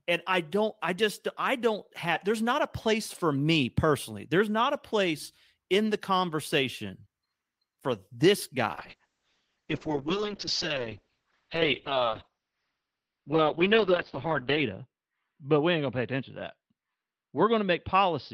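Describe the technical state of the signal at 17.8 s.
At 17.8 s the call bitrate drop is still under way; it began at 8.74 s, just after "for this", and runs to the end. The encoder is starved of bits, consistent with a fall from about 32 to 6 kbps, and the audio band shrinks from 20 kHz to 6 kHz. The sound is muffled and watery yet continuous, with no gaps or repeats as packet loss would cause.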